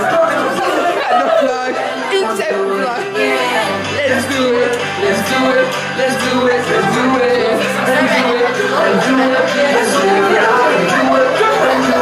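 No technical faults can be heard in this audio.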